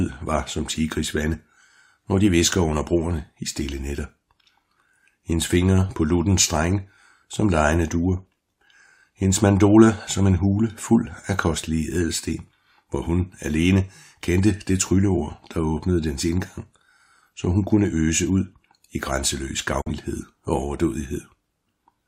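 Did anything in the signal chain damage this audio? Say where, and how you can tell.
Yes: a digital broadcast dropout at the receiver, 19.81 to 19.92 s. An 8 ms fade into brief silence fits one corrupted frame being muted.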